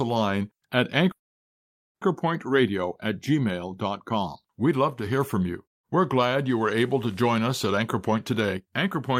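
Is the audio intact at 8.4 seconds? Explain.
No. At 8.4 seconds the audio sits inside a jitter buffer speed-up that runs from about 7.77 to 9.10 s, starting just after "to join us at". Too much audio had built up in the receive buffer, so the receiver trimmed many short pitch-period-length segments in succession, roughly a third of a second in total. The pitch stays unchanged, but the speech plays at about 118% speed and sounds noticeably hurried.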